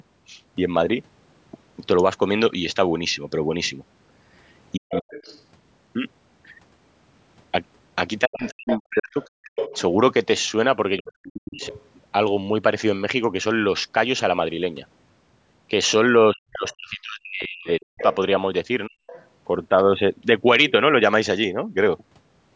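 At 4.76 to 5.14 s the speech dips hard, roughly 40 dB at its deepest, and around 4.91 to 5.42 s the other side's voice leaks through underneath at roughly 10 dB below the talker. The same pairing returns from 8.26 to 11.62 s, where the talker is chopped away in pieces while that second voice comes through close to level with it, about 5 dB down, between 8.44 and 9.78 s, and again faintly near 11.55 to 11.82 s. From 16.34 to 19.02 s the speech drops out in chunks once more, with a quiet leak, around 20 dB down, running from 16.73 to 19.26 s.

The dropouts are speech suppressed in double talk. Both sides were talking at once, and the echo canceller likely couldn't tell the talker from the loudspeaker echo, so it pulled everything down and left the speech broken. The leaked voice is likely echo the canceller didn't fully remove from the microphone, so the far side's speech bleeds into the recording.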